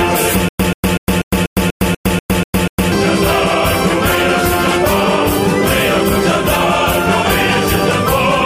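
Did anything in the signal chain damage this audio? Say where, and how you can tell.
Yes: stutter with silent gaps from 0.49 to 2.92 s. A 135 ms burst recurs every 243 ms between digital silences, likely a stalled playback stream replaying its last fragment.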